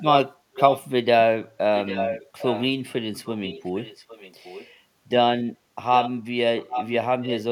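Echo leak appears at 0.55, 1.76, 3.14, 5.94, 6.62 and 7.22 s. A delayed copy of the speech returns about 0.8 s late. It is loudest near 1.8 and 6.6 s and faint from 3.1 to 4.7 s, likely from a loudspeaker-side echo canceller passing residual pickup.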